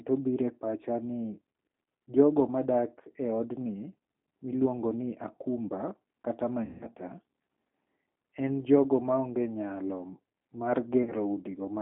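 Throughout, the speech sounds thin, rough and slightly synthetic, confined to about 200 Hz to 3.6 kHz. This is the G.729 codec at 8 kbit/s, rebuilding the voice from a filter and pitch model.

From 6.65 to 6.89 s, just after "miluongo ni akumba kata", the sound smears into a fading buzz or coloured noise. A shorter smear follows at 11.03 to 11.12 s. Both are VoIP packet loss concealed by the speech codec: the decoder stretched its last pitch and filter while lowering the gain. The first gap, about 160 ms, fits eight 20 ms packets; the second is about 40 ms.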